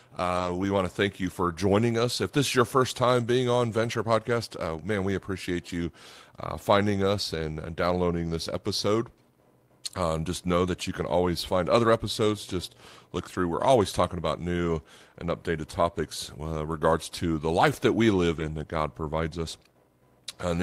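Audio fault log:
0.35–0.49, 3.83–3.85, 13.33–13.35 and 18.35–18.41 s: lost packet rebuilt from error correction. Short stretches of 80, 20, 20 and 40 ms come through rough and noisy but without gaps, because the decoder played low-bitrate copies carried in the following packets. The first lands right before "we want to thank", and the last sits between "the life that we" and "in that".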